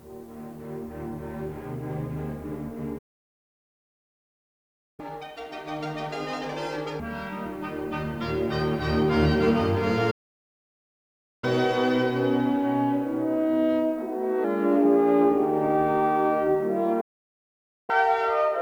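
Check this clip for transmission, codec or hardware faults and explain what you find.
Three playback stalls occur, each followed by catch-up at higher speed.

Playback stalls at 2.98–5.00 s (2.0 s), 10.10–11.44 s (1.32 s) and 17.00–17.90 s (0.87 s): the sound cuts to silence mid-flow, then resumes. The likely cause is the player's buffer running dry or its thread being blocked.

Catch-up at higher speed at 5.00–7.00 s (2.0×, pitch up about ten semitones), 11.44–14.44 s (1.1×, up about a semitone and a half) and 17.90 s to the end (2.0×): the player resamples its backlog to recover lost time, so speed and pitch rise together, then settle after the first two.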